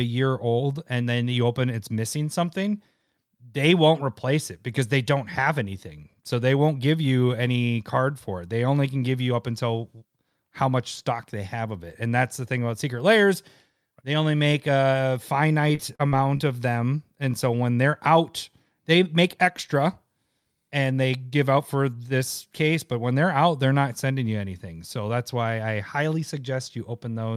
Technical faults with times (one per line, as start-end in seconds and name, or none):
15.75-16.41 repeated packet loss (robotic sound)